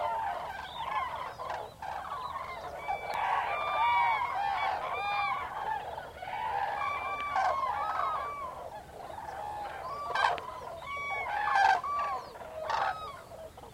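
A sudden voltage step, likely from a plug, switch or static discharge, hits this recording of sounds three times, producing a loud pop at 3.14 to 3.16 s, 7.21 to 7.23 s and 10.38 to 10.40 s, each a single sharp thump well above the ongoing sound.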